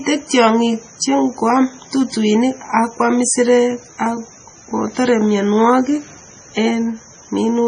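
It's a speech clip with heavy MP3 compression all the way through, most likely from a low-bitrate encode that fits roughly 24 kbps. Nothing comes through above about 9.7 kHz, and the starved encoder switches weak frequency bands on and off, giving that watery, swirly smear.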